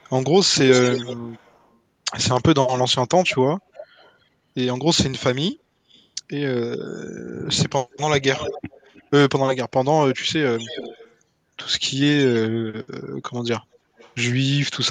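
A speech recording with an echo leak in eight stretches: 0.0–0.11 s, 0.7–1.75 s, 2.35–4.15 s, 5.89–6.06 s, 7.91–9.04 s, 10.14–11.15 s, 12.17–12.4 s and 13.74–14.15 s. A delayed copy of the speech trails the original. The delay grows slowly from 292 ms to 318 ms. The echo is loudest at 0.7 s and 7.91 s, about 10 dB below the speech. At its faintest it is about 35 dB down. The likely cause is a far end on a loudspeaker whose echo canceller let part of the signal back into the microphone. Two single clicks sit at 4.96 s and 14.0 s. Each is a thin vertical line across the spectrum. These are dropped samples. The stream likely lost a tiny fraction of a millisecond, so the waveform jumps to a later value. The gap is far too short to remove any sound.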